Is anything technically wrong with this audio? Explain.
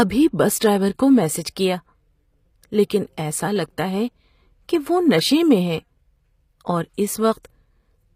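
Yes. The whole clip shows HE-AAC compression damage, and it is plainly audible. The treble sounds synthetic. The s sounds come out gritty and lispy. Nothing is present above 15.5 kHz. The likely cause is HE-AAC coding at a low bitrate, around 24 kbps. It stores only the lower spectrum properly and rebuilds the highs by copying lower bands upward. The copied harmonics no longer line up with the real ones.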